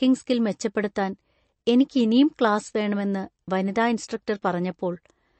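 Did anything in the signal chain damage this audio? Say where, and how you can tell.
Yes. The damage is at the codec stage and runs through the whole speech clip: nothing is present above 8.3 kHz, and the sibilants and decays sound watery and swirling. This is likely MP3 compression at a bitrate around 37 kbps, where the encoder cuts the treble and lets weak spectral lines flicker on and off between frames.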